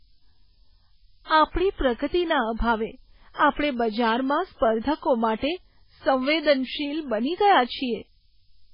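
Speech runs the whole clip over a steady, thin hiss that climbs strongly toward the top of the band, sitting only about 20 dB below the speech. That is low bit depth with noise shaping: the signal is quantised coarsely, consistent with roughly 8 bits, and the rounding error is fed back so its energy is pushed up in frequency, away from where the ear is most sensitive. The noise never drops out in gaps, because it is tied to the coarse resolution rather than to the talker.

The clip also carries heavy codec damage throughout. The sound is watery and swirly, s sounds turn metallic and chirpy, onsets smear, and there is no content above 5.2 kHz. The likely cause is MP3 compression at a very low rate, which fits something near 16 kbps. Starved of bits, the encoder zeroes weaker frequency lines that flicker on and off between frames and applies a fixed treble cut-off.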